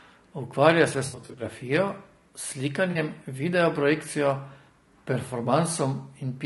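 Low-delay AAC compression runs throughout the speech, most likely AAC-ELD at around 32 kbps; short frames resolve harmonics poorly, leaving a plainly rough, grainy texture. AAC frame loss with concealment appears from 1.05 to 1.43 s, with about 200 ms lost in scattered runs of up to roughly 70 ms, heard as smeared, noisy patches where the decoder refills from earlier spectra. A second, 40 ms loss at 2.91 to 2.97 s gives a brief phasey smear.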